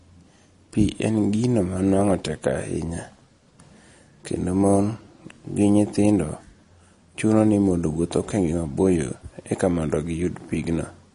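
Throughout the speech, nothing sits above 10.6 kHz, and the sibilants carry a watery, swirling chirp. This is likely MP3 compression at a low bitrate, around 40 kbps by the sound: short of bits, the encoder cuts the treble and drops quieter spectral detail frame by frame.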